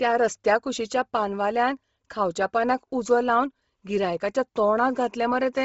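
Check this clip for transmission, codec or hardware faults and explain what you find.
One codec fault runs through the whole clip. Bluetooth LC3 compression is the likely cause: heavy low-bitrate transform coding strips everything above 7.7 kHz, leaving the speech grainy and breathy, consistent with 7.5 ms frames at 24 kbps.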